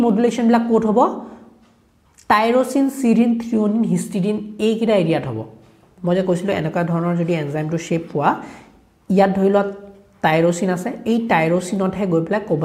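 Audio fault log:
No faults can be heard anywhere in this clip. There is nothing in the sound to log.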